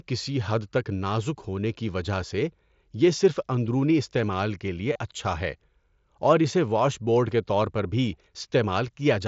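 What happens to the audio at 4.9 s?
At 4.93 to 4.96 s there is a brief concealed Bluetooth headset packet loss, about 22.5 ms long, which fits roughly three lost frames on the mSBC wideband link. The receiver filled the gap by repeating the best-matching stretch of the preceding 20 ms or so, so the sound is a short buzzy, held tone at full level with a slight warble as real audio resumes. A plain dropout would instead leave a silent gap or click.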